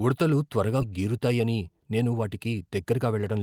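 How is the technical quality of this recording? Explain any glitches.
The recording has two timing faults. The speech jumps forward once and then runs fast for most of the remaining clip.

At 0.81 to 0.83 s there is a skip ahead. Roughly 0.7 s of audio was dropped and both sides were joined with no gap. Unlike a dropout, there is no silence or fill.

From 0.91 to 3.36 s comes a jitter buffer speed-up. Repeated pitch-period cuts, about a third of a second in total, make the speech run at 111% with unchanged pitch. Unlike a skip, nothing is missing outright.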